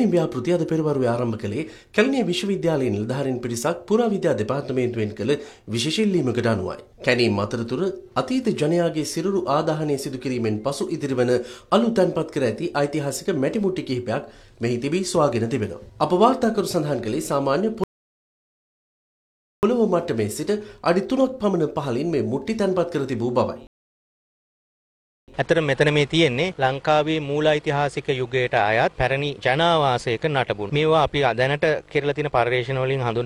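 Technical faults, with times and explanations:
17.84–19.63 s and 23.67–25.28 s, rebuffering stall: the player ran short of downloaded audio, so playback halts to silence for about 1.8 s and then 1.6 s, resuming exactly where it stopped. Both gaps show as flat waveform and blank spectrogram columns.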